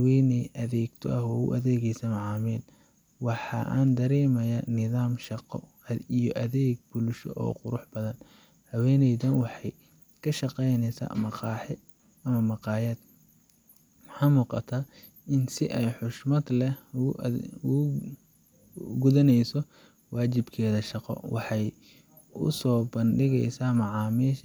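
No technical faults can be heard anywhere in the speech.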